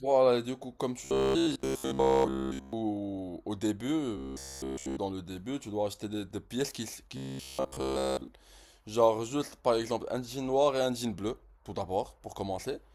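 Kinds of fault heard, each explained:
Robotic sound from repeated short buffers: three stretches of the speech become a rigid metallic buzz fixed at 66.8 Hz, likely a block of about 15 ms replayed when fresh audio arrives too late. It covers most of the first stretch and nearly all of the other two.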